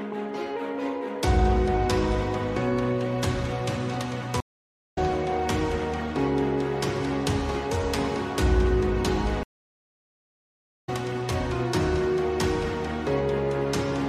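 Two stream reconnects here: the audio drops out at 4.40 s for about 0.54 s and at 9.43 s for about 1.39 s. Each time the player lost its connection, reconnected and restarted the decoder mid-stream, so playback picks up roughly half a second and a second and a half further on.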